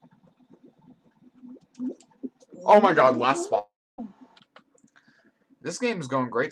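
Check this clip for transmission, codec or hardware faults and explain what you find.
Two faults stand out, both in the middle of the clip.

From 2.74 to 3.24 s the sound slows by about 6.4% and drops about 115 cents, just over a semitone. This is likely a drift correction step: clock-matching software changed the playback rate in one move to manage its buffer. Speed and pitch fall together in a single step, which separates it from wow or flutter, where the pitch wavers continuously instead of stepping down.

From 3.59 to 4.00 s there is a long network dropout, likely caused by about 400 ms of audio failing to arrive. The receiver stretched the last sound into a fading buzz or hiss, and roughly the final 270 ms is near-silence. When the sound returns, that stretch is simply missing. A short packet loss leaves a brief click or smear, but this gap is long enough for the concealment to fade out completely.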